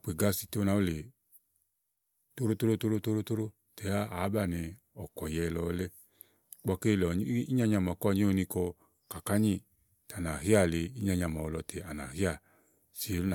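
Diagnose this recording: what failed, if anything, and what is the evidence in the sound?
Nothing in the signal chain has failed: the speech signal arrives continuous and intact, with no audible sign of trouble at any stage between capture and playback.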